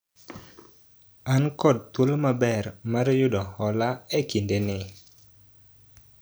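Speech recording with no technical faults to be heard.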